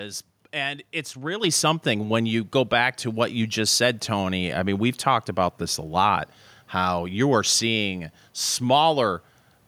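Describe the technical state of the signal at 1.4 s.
At 1.44 s the microphone volume is stepped up: the call software judged the input too quiet and raised the device's capture gain in a single jump of about 6 dB. Speech and background noise both become abruptly louder together from that instant onward.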